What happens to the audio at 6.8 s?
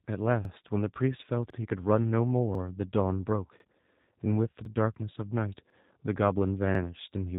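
Overlapping chunks at 6.75 to 6.80 s: a new 1-second chunk begins before the previous one ends, so 50 ms of speech plays twice, heard as a brief stutter. G.729 codec coding runs through this moment as well, its 8 kbit/s reconstruction cutting everything above 4 kHz and leaving the speech plainly rough and synthetic.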